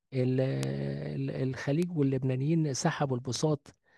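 Three sharp, isolated ticks cut through this speech clip at 0.63 s, 1.83 s and 3.36 s, each a broadband click unrelated to the voice, peaking at about -12 dBFS for the first two and about -18 dBFS for the last. These are bit error spikes: a flipped bit in memory or on a digital link throws one sample, or a few in a row, off by a power of two before the signal snaps straight back.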